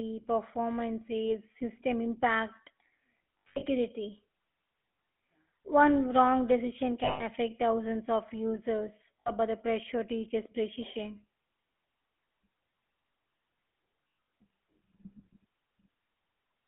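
The whole clip runs through the GSM full-rate codec, at 13 kbps, squeezed into a 250 Hz to 3.4 kHz phone band. The vocal-tract model driven by a sparse pulse excitation gives the speech a plainly buzzy, gravelly grain, and there's nothing up top.

Lost GSM frames show up at 1.28–1.34, 3.39–3.64, 7.04–7.24, 9.20–9.30 and 14.04–14.32 s. Each time, the decoder repeats the last good frame, so the sound hangs as a rough metallic ring. The 3.39 and 14.04 s drops are scattered, with the longest runs around 70 ms and about a tenth of a second.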